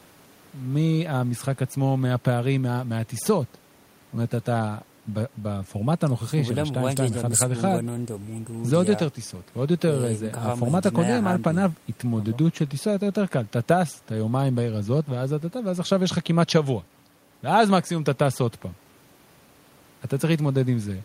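Speech recording with no audible technical faults.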